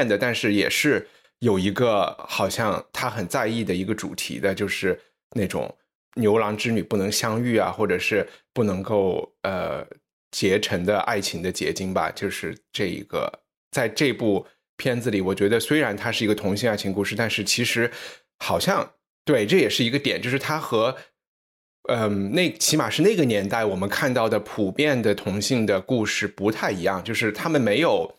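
At 6.95 s there's a single sharp click in the speech, most likely from dropped samples. A handful of samples, a fraction of a millisecond's worth, went missing, so the waveform jumps straight to a later value. Nothing audible is lost, just that one tick.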